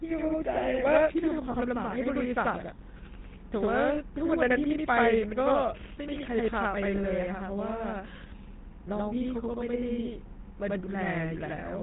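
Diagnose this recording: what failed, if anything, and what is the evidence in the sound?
At the driver or buffer stage, one channel arrives late and the two are summed to mono, producing a channel delay doubling. Every sound is followed by an equal-level slap about 85 ms later, which fits a 4096-sample buffer.

At the codec stage, the speech has a buzzy, gravelly roughness and nothing above 4 kHz throughout, the plainly audible signature of the GSM full-rate codec. It models the vocal tract and excites it with sparse regular pulses, which fits its 13 kbps rate.

In the network path, lost GSM frames occur at 1.52–1.56 s, 3.94–4.00 s and 6.96–7.03 s. Each is heard as a brief rough, metallic ring. The decoder repeated the last good frame's settings to cover one missing 20 ms frame.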